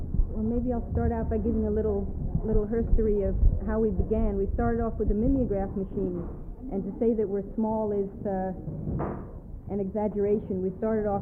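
Nothing in this audio calls for comment, since there's no technical fault to be heard anywhere in it.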